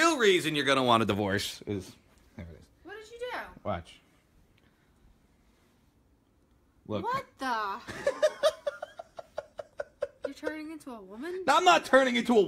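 No technical faults can be heard anywhere in this audio.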